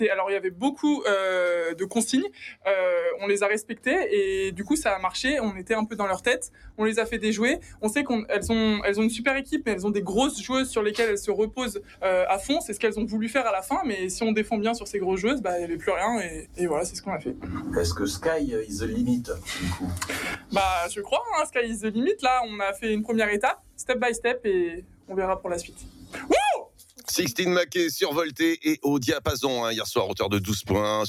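Throughout the clip the level pumps and flutters by a few decibels, with sustained parts and tails thinning while attacks pass cleanly. This is a noise suppressor built for speech applied to music or sounds, mistaking steady tone and ambience for noise.

Sharper dips come where the sound is cut by the noise suppressor, at 0.47 to 7.83 s, 11.81 to 12.02 s, 16.42 to 17.47 s, 19.39 to 20.53 s and 23.56 to 27.08 s. Held or decaying material sinks by up to about 11 to 12 dB, briefly in the short spans and for around one and a half seconds in each of the two longest.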